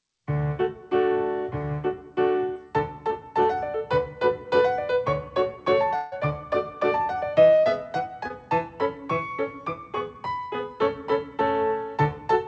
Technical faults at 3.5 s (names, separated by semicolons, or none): none